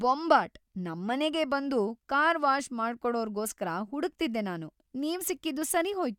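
Speech, with nothing technically wrong to point to.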